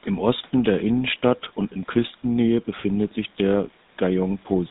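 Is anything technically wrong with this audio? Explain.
Yes. Throughout the clip the speech has passed through the GSM full-rate codec, with plainly audible damage, and the narrow, coarse sound fits its 13 kbps rate. The codec models the vocal tract and excites it with regularly spaced pulses, keeping only every third excitation sample, and passes nothing above 4 kHz. The speech therefore sounds muffled and buzzy, with a gravelly roughness over the voiced sounds. The room noise, about 33 dB below the speech, belongs to the recording itself.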